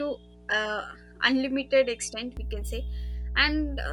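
A mains hum runs through the whole speech clip: a steady 60 Hz tone, picked up when a ground loop or a nearby transformer lets the power line leak into the signal path. Here it is strong, sitting only slightly below the level of the speech. It is heard as a constant low drone with a few low harmonics, present under the talking and in the pauses alike, and unchanged from start to finish.

From 0.0 to 2.37 s the speech sounds duller, with nothing above 11.2 kHz, as if captured through a narrower-band device. At 2.37 s the top end opens up again with no gap and no jump in loudness, pointing to an input that was likely switched to a poorer device for the opening stretch and then back. The lesser device's own background noise is very low, so the change is heard purely as lost brightness and air.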